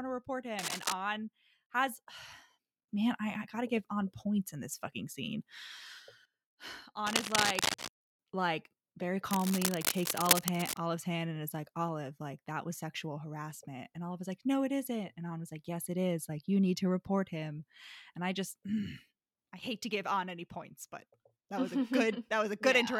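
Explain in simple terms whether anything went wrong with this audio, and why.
Three bursts of cable scratch noise sit on top of the speech: at 0.59 to 0.93 s, just after "to report"; at 7.06 to 7.89 s, just before "like very"; and at 9.31 to 10.78 s, right after "like very." Each sounds like scratching or rustling. The first is a little quieter than the speech, and the later two are roughly as loud as it. The likely cause is a worn cable or connector being moved, so its electrical contact flickered and added uneven noise.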